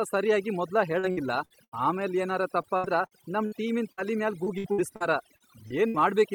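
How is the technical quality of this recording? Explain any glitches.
The technical quality is poor, with heavy processing throughout and repeated dropouts from a lossy network connection.

Overdone noise removal runs through the whole clip. The suppressor cuts any frequency band close to its noise estimate, taking soft parts of the speech with it. The background collapses to near silence with twinkling specks. On a spectrogram this appears as an unnaturally clean floor dotted with isolated bright flecks.

Repeated packet loss gives a robotic sound from 0.99 to 1.74 s, 2.62 to 3.54 s and 4.44 to 5.96 s. Each run contains several short gaps, the longest about 76 ms in the first two runs and 60 ms in the third, each patched by extending the preceding sound before the next gap arrives. The speech turns choppy, with pieces missing. The spectrogram shows smeared, repeated harmonic blocks interrupting normal detail.

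A burst of packet loss hits from 3.92 to 4.06 s. About 60 ms of audio is gone, bridged by roughly 56 ms of continued, fading sound, and the speech then resumes further along. It is heard as a brief held buzz or fading hiss. The waveform shows a smooth, decaying stretch before normal speech returns.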